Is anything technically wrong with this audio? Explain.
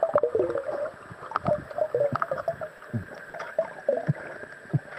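Yes. There are three short stalls from a late packet, at 2.77 to 2.82 s, 3.03 to 3.08 s and 3.29 to 3.36 s. Each time a packet was late and the jitter buffer ran dry. The receiver held the last sound until the packet came, then carried on where it stopped. The first two holds last 20 ms and the third 40 ms. Nothing is lost, but the sound briefly smears, with a faint buzz or dip.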